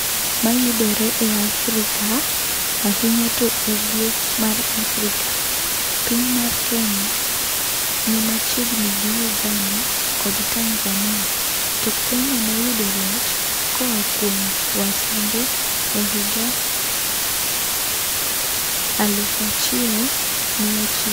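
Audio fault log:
throughout, low bit depth with dither: a constant, even hiss sits under the speech at nearly the level of the speech itself, with no grit or distortion. The signal uses only 3 bits, and dither spreads the rounding error into steady white noise.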